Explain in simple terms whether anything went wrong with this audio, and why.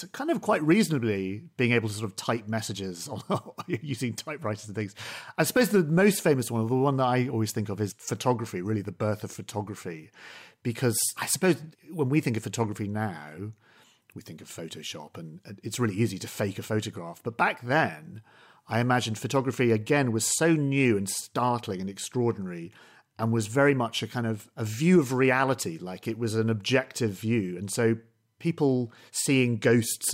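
Nothing went wrong with this bit of speech, as there's no glitch, dropout or other technical hiccup anywhere to be heard.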